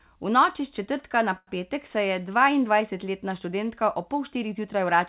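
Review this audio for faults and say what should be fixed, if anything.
At 1.38 to 1.49 s, a short stall from a late packet: the jitter buffer emptied, so the speech is held for 91 ms, then resumes intact. A slightly deeper jitter buffer, or steadier packet delivery on the network path, would prevent this stretch.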